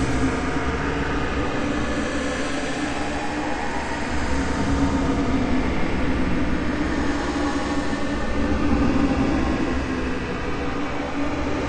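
MP3 compression runs throughout the clip, with plainly audible damage that likely comes from MP3 encoding at a bitrate around 64 kbps. Short of bits, the encoder cuts the treble and drops weaker frequency lines that flicker between frames, giving a watery, swirling texture and smeared attacks.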